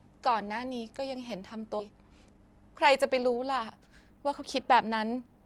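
At 1.79 s the speech lurches forward with no audible gap: the sound on one side butts straight against the sound on the other, and roughly a second of speech is simply gone. This is a skip ahead. A stretch of audio was thrown away while later audio was already queued, so playback jumped to the waiting material. The listening delay shrinks by about the same second, and nothing was filled in at the join.

From 1.89 s to 5.20 s the speech runs noticeably quick, about 114% of normal speed, yet the pitch stays where it was, giving a hurried, clipped delivery. This is a jitter buffer speed-up. The receiver was holding more audio than its target, so it repeatedly cut out short slices of one or a few pitch periods to drain the excess, removing around half a second in total. The speech passes through an Opus call path whose band stops near 12 kHz.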